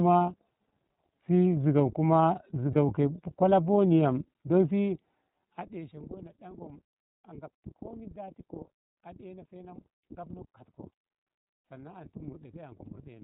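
The whole clip runs through the iLBC codec, so everything above 4 kHz is gone and the speech has that slightly rough, synthetic edge. The codec damage is plainly audible, and the grain fits iLBC's 13.33 kbps mode with 30 ms frames.

At about 2.72 to 2.76 s there's a lost iLBC frame, which fits a single missing 30 ms frame. The decoder fills it by repeating the last pitch cycle with some noise, so you hear a brief buzzy held vowel before the speech snaps straight back.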